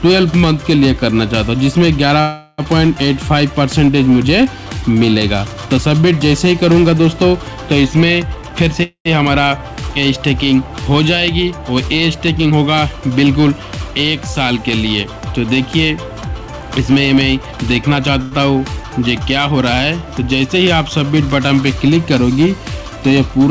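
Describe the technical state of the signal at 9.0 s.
At 9.0 s the signal is inside a call audio freeze (8.83 to 9.08 s). The jitter buffer likely ran dry, so the last sound is stretched into a fading buzz or hiss, ending in about 90 ms of silence. No audio is lost; everything after arrives about 225 ms late. On a spectrogram this shows as a smeared, repetitive band, capped at 8 kHz like the rest of the call, that thins to a blank strip.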